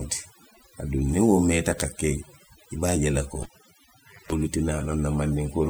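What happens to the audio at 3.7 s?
At 3.7 s the audio sits inside a cable pulled and plugged in event running from 3.43 s to 4.33 s, just after "je la ko". Pulling the live lead gives a pop, then about 0.85 s with the lead out, mostly near silence but including roughly 0.23 s of 50 Hz mains buzz while only the plug tip makes contact, and a second pop as the sound returns. On a waveform this shows as two sharp spikes around a flat gap. On a spectrogram the pops are vertical broadband lines, and the buzz is horizontal bands at 50 Hz and its harmonics.

The whole clip, this moment included, also carries overdone noise removal. An over-aggressive denoiser has cut individual frequency bands whenever their level fell near its noise estimate, taking quiet parts of the speech with them. The background becomes near silence scattered with twinkling specks. On a spectrogram the background appears as isolated flickering dots on a dark field, with holes bitten out of the speech's harmonics and their weaker edges.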